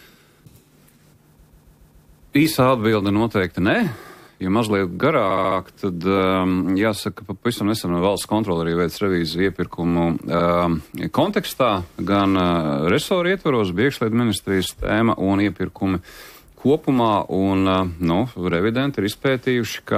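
Repeated frames stutter from 1.42 to 2.25 s, a 139 ms block replayed six times, and from 5.30 to 5.58 s, a 70 ms block replayed four times.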